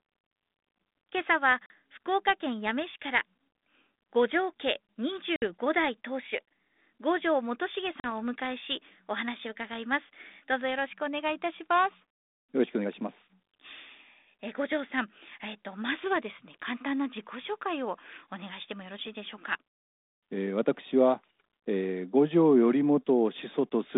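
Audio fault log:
1.66 s, 5.36 s, 8.0 s: packet loss on an ADPCM call, hard silent gaps of 40, 60 and 40 ms, then slightly distorted speech while the decoder's predictor resynchronises.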